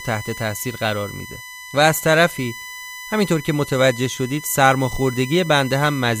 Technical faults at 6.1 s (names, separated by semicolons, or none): USB whine